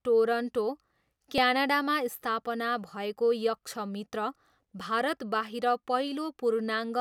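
A dropped buffer (overrun) shows up at 1.38 s and again at 4.81 s in this speech. Each time, a short slice of audio, around 10 ms, is missing, and the sound on either side is butted straight together with no gap. The join comes through as a jump in the speech. The likely cause is that the capture software fell behind and the hardware overwrote those samples before they were read.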